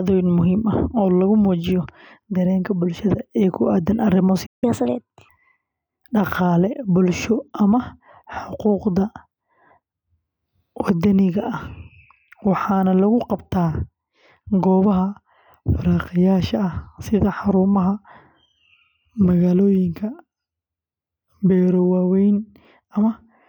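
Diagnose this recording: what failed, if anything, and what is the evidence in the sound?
The failure is at the playback stage. At 4.46 s the speech cuts out mid-flow and the output sits silent until 4.64 s, a playback stall of about 163 ms. That points to the player starving for data or its output thread getting blocked, most likely a buffer underrun on the playback side.

Straight after the gap, from 4.64 s to 5.29 s, there's catch-up at higher speed. The speech runs at 1.25 times normal and the pitch jumps by roughly four semitones, so it sounds briefly chipmunky before settling back down. That's the player resampling its backlog to claw back the lost time. About 0.65 s at that rate recovers the 163 ms of delay almost exactly, and then it drops back to normal speed.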